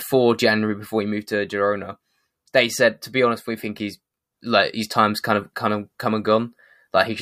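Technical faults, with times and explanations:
No technical faults can be heard in the speech. There is nothing to report at any point in the clip.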